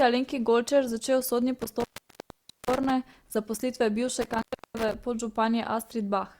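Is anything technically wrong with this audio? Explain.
Yes. The speech drops out with crackle at the edges, from 1.61 to 2.91 s and again from 4.21 to 4.94 s, leaving faint hiss. This is intermittent contact: a loose cable or plug breaking the connection for about 850 ms, then about 330 ms.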